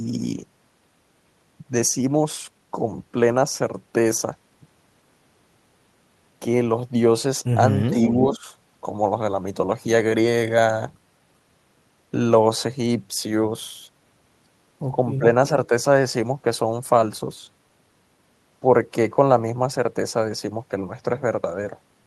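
A speech recording with two kinds of call-processing fault. Speech suppressed in double talk appears three times: a shallow dip of about 5 dB at 7.90 to 7.95 s, a deeper one of about 10 dB at 8.31 to 8.45 s, and the strongest, about 15 dB, at 15.18 to 15.24 s. Each is heard as the voice briefly sagging or thinning. The likely cause is an echo canceller that met simultaneous talk from both ends and, unable to separate its own talker from the loudspeaker return, turned the whole signal down. On a waveform these show as short notches in the envelope. On a spectrogram they appear as brief vertical bands where energy fades. An echo leak runs from 7.91 to 8.14 s, overlapping the first dip. It is heard as a delayed copy of the speech, trailing the original by about 389 ms and sitting about 5 dB below it. This is likely residual loudspeaker sound that the canceller failed to remove before sending it back. 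A spectrogram would show the harmonic pattern of the preceding speech repeated, weaker, offset to the right by roughly 0.39 s.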